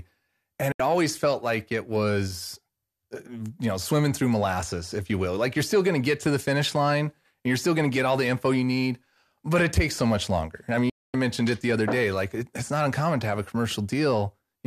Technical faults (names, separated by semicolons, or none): digital broadcast dropout